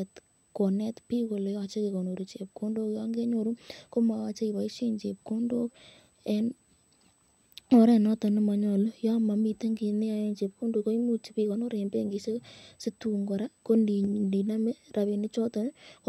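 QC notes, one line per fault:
Throughout: USB whine, a steady high tone sitting right at 8 kHz, roughly 40 dB under the speech. That's the 125 microsecond microframe rhythm of USB bus current getting into the audio through power or ground, so the pitch never wanders.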